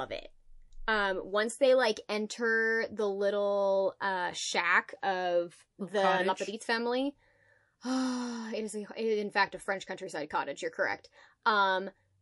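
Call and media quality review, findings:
Watery, swirling speech with smeared consonant onsets, audible across the whole clip. Likely MP3 compression at a low bitrate, around 48 kbps: weak spectral lines switching on and off between frames.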